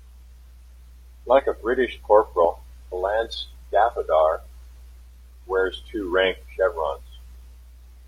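At 1.34 to 1.40 s, damaged data in the compressed stream makes the decoder misread frames and resync, giving a brief glitch.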